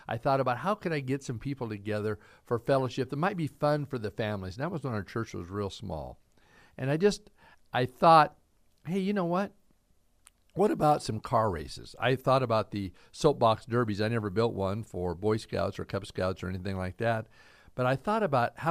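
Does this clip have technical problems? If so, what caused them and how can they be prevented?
No, the speech signal shows no audible technical faults, so there is nothing here that calls for a cause or a preventive measure.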